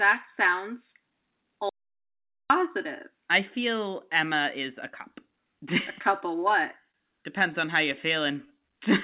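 From 1.69 to 2.50 s the speech drops out to silence for about 0.81 s. It stops in mid-flow and returns just as abruptly, with no room tone in the gap. That points to the input likely having been lost, through a disconnect or a stray mute, while the recorder kept writing silence. On the waveform this audio dropout to silence is a flat line. On the spectrogram it is a dark vertical band with hard edges, and whatever was said there is gone.

At 6.91 to 6.97 s there is a short stall from a late packet. A packet arrived too late, the jitter buffer ran dry, and the receiver stretched the last sound by about 25 ms before carrying on from where it left off, so nothing is missing. The sound is held a moment too long, with a slight buzz or dip. The spectrogram shows the harmonics running flat and smeared for that instant, and the waveform shows a short run of repeated, near-identical cycles.

From 8.21 to 8.78 s a jitter buffer slow-down sets in. 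The receiver repeated single pitch periods and slivers of pause to rebuild its reserve, adding about 59 ms, so the speech runs at roughly 91% speed at unchanged pitch. It sounds drawn out. On the spectrogram the formant patterns are stretched sideways while the harmonic spacing stays the same. The waveform shows runs of repeated periods. Throughout, nothing appears above 4 kHz, which points to a narrowband call codec such as G.711 A-law at 64 kbps.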